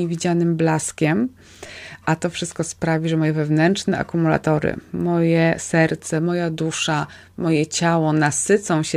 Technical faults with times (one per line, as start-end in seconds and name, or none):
1.66-1.70 lost LE Audio frames